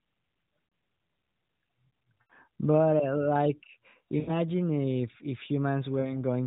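Speech over an AMR narrowband mobile link where corrupted radio frames failed their checksum, producing lost AMR speech frames that the decoder concealed by fading previous settings. Each loss is heard as a smeared, dipping warble at 0.68–0.72 s, 2.22–2.33 s, 4.2–4.35 s just before "if if", and 6.0–6.23 s just after "if if".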